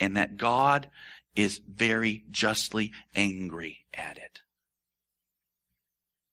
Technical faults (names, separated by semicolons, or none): none